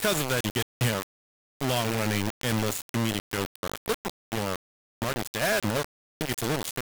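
From start to end, the speech carries heavy grainy distortion. It sounds like low bit depth without dither, likely rounded to about 3 bits. The error tracks the signal and sits nearly as loud as the speech. Quiet moments sputter or drop out.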